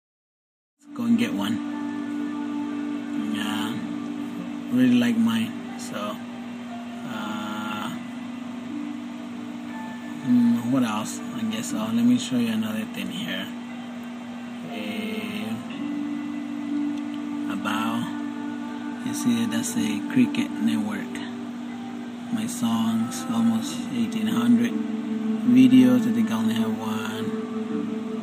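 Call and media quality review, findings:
No faults found; the signal rises in a smooth fade-in from about 1 s to full level at 1.3 s and holds a steady, intact technical state throughout.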